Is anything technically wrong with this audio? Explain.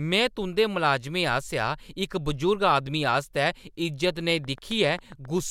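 Yes. From 4.31 to 5.39 s, a train of clicks at about 7.5 per second, evenly spaced and as loud as the speech, likely from electrical interference or a faulty connection or power supply.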